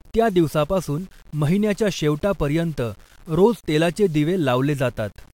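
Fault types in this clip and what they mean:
Low bit depth without dither, throughout: the speech carries a grainy distortion that moves with the signal, sitting roughly 35 dB below it. This fits samples likely rounded to about 8 bits with no dither, so quiet syllables and decaying tails turn gritty instead of softly hissing.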